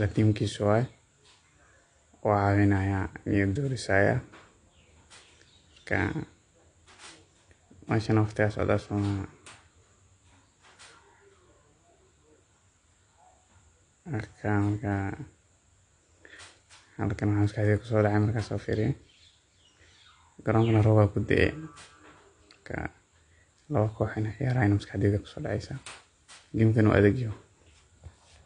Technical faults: AAC compression

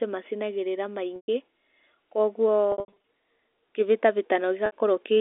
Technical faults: packet loss with pitch repetition

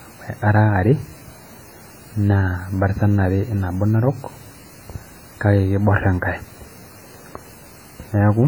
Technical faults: WMA compression

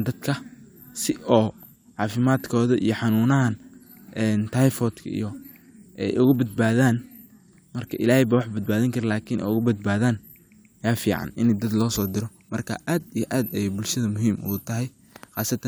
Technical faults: none

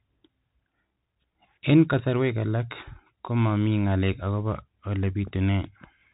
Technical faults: Bluetooth CVSD headset codec

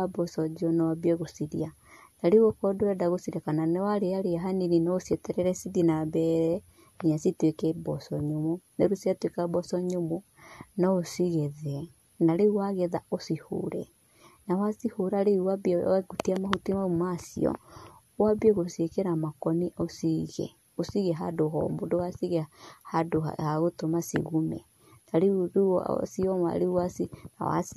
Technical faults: loud pop

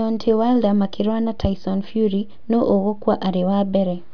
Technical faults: none

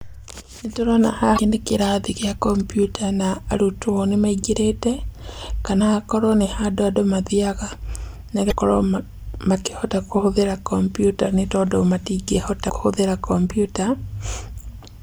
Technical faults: damaged data in a compressed stream

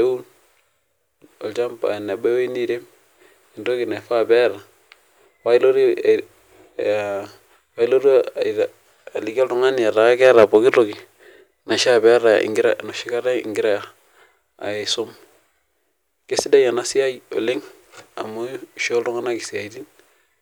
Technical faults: hard clipping

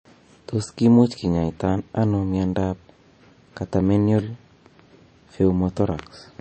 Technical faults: MP3 compression

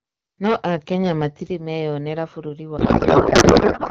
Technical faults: microphone overload; microphone volume stepped down; codec payload misread

